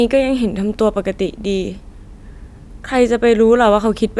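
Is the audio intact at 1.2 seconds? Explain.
Yes, at 1.2 seconds the speech plays through cleanly, with no dropout, click, distortion or other fault at that point.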